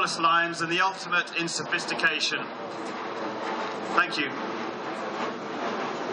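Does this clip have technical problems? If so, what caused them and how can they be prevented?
No, the signal holds steady throughout, with no dropouts, level jumps or other disturbances audible at any point, so there is nothing here that needs a cause or a preventive fix.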